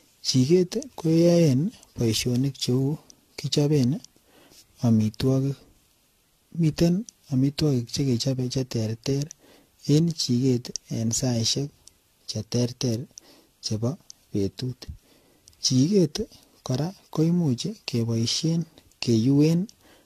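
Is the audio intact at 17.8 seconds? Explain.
No. Generation loss affects 17.8 s and the whole clip. Speech likely re-encoded about seven times, fitting 64 kbit/s AAC, sounds swirly and hollow, with nothing above 14.2 kHz.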